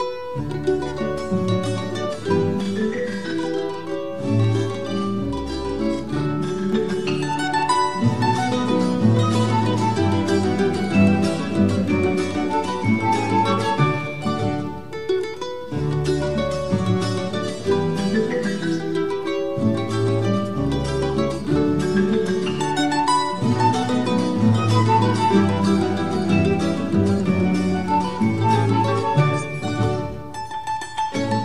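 From 2.61 s to 6.73 s there's a channel delay, and it comes through as doubling. One side of the stereo pair runs about 46 ms behind the other, which fits a 2048-sample buffer. Once the two sides are folded to mono, that late copy doesn't blend in. It sits just far enough behind to register as a separate slap at the same level, so everything in that stretch sounds doubled, like a quick echo tracking right behind it.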